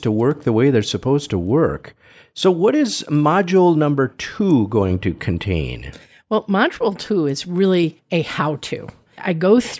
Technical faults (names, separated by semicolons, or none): none